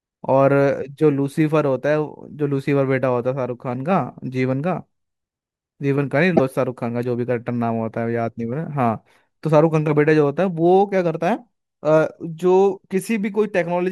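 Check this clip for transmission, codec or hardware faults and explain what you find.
One fault is audible in this speech clip: damaged data in a compressed stream, from 6.33 to 6.40 s. For about 76 ms, part of the encoded stream is corrupt, so the decoder cannot parse those frames correctly, loses frame sync and scans forward for the next valid header before resuming. The result is a brief chirp, squawk, click or short hole where the speech should be, as playback picks up again.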